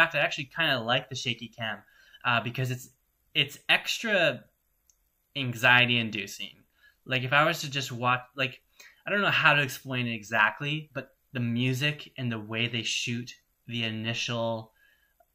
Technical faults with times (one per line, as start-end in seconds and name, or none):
none